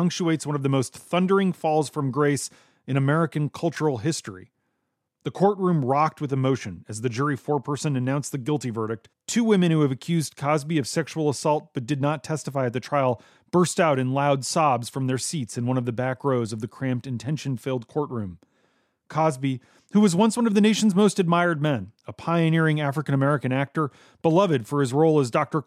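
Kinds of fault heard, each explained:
No technical faults can be heard anywhere in this recording.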